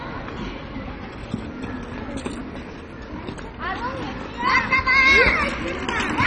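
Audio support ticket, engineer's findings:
Dull, gurgly, grainy throughout, nothing above 10 kHz. Likely MP2 compression starved of bits, upper sub-bands dropping out. Fits roughly 32 kbps, heavy damage.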